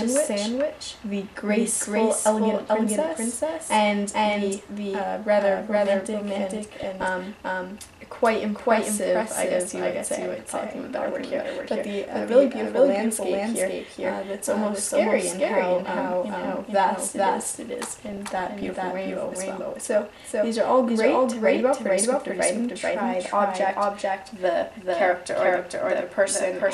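From start to finish a doubled audio track is present. A second full-band copy, about as loud as the first, trails it by roughly 0.4 s, most likely from a second, slower capture path. Every onset is heard twice. On a waveform each transient has a twin at that fixed gap, with no decay or room colour between them.

Between 6.83 and 7.08 s, and again from 18.03 to 18.74 s, DAB burbling breaks through. Bit errors from weak reception slipped past error correction into the MP2 data, corrupting samples. The result is short blips of noise in single sub-bands. On a spectrogram it appears as isolated sub-band blocks flaring for single frames.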